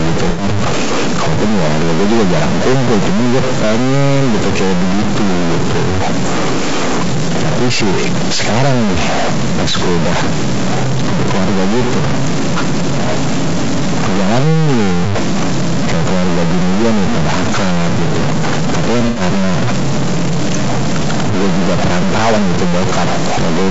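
From the opening second and continuing to the end, the speech carries distortion, and the pauses are filled with a steady noise floor instead of falling quiet. That combination is characteristic of a stuck bit. One bit of each sample is likely held at a fixed 0 or 1, so roughly half the values are pushed off by that bit's weight. Near silence the error flips with the sign of small values, which is why the gaps hiss.

Also present throughout is low-delay AAC compression, and its damage is plainly audible. The voice sounds rough and grainy, noise sits between the pitch harmonics, and the top band sounds thin and synthetic. This likely comes from AAC-ELD, the short-frame codec used in video calls. Its brief frames resolve harmonics poorly, and the depth of the damage fits a low bitrate of around 32 kbps.

From 0.29 to 0.43 s, the sound turns briefly smeared and noisy. This is AAC frame loss with concealment. 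About 90 ms of coded audio, consistent with three lost frames, was missing, and the decoder rebuilt it from the last good spectrum with randomised detail, giving that blurred, phasey patch. The same fault returns from 19.07 to 19.21 s with the same 90 ms length and the same smeared character. In neither case does the gap run long enough to fade into silence.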